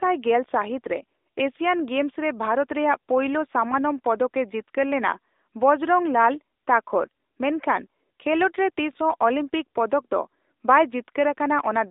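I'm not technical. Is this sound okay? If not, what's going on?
No. From start to finish, the speech has been squeezed through an AMR narrowband mobile codec, the system older mobile calls use. Everything above about 3.8 kHz is gone, and the voice sounds buzzy and synthetic, which a simply muffled recording wouldn't.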